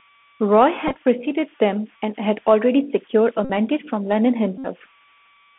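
Throughout the clip, a faint whistle around 1 kHz sits in the pauses, with grainy noise under quiet passages at about 32 dB below the speech. These are converter idle tones: an undithered delta-sigma converter, fed very little signal, settles into repeating bit patterns that produce a tone. Mains hum would sit at a low, steady pitch, and codec hiss would be broadband. This is a thin, pitched whistle that shows most in the gaps.

The whole clip is also band-limited to roughly 200 Hz to 3.4 kHz. Unlike a plain telephone filter, it carries a granular hiss, and s sounds turn scratchy where loud, bright sounds outrun the adaptive step. That slope-overload roughness marks the Bluetooth CVSD headset codec, whose one-bit up-or-down coding points to a 64 kbps link.

At 0.87–0.96 s, just before "preceded them and had", a Bluetooth headset packet repeated. About 45 ms of packets were lost, spread over 75 ms in short runs, and the chip replayed the previous packet each time. 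This gives brief ticks and a rough buzz rather than silence. At 3.45–3.50 s, right after "had already secured a", about 49 ms is repeated. At 4.58–4.67 s, about 64 ms is repeated. In these two longer runs the 3.75 ms repeat forms a steady buzz near 267 Hz. A true dropout would go silent, whereas these runs buzz at that fixed pitch.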